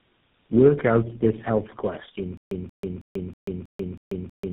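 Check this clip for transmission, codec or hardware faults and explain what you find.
Two faults are present: tandem speech coding across the whole clip, and a stutter with silent gaps from 2.37 s to the end.

Tandem speech coding runs throughout. The speech passed through four codecs in a row: AMR-NB, G.729A, then GSM full rate twice, with G.711 links between them. Each re-encode degrades the last, so the speech sounds rough, muffled and warbly. On a spectrogram, nothing appears above 3.8 kHz.

The stutter with silent gaps starts at 2.37 s and lasts to the end. A 181 ms fragment repeats seven times, each followed by 139 ms of digital silence, giving a 320 ms cycle. The likely cause is a stalled stream replaying its last buffer. The waveform shows identical bursts separated by flat lines.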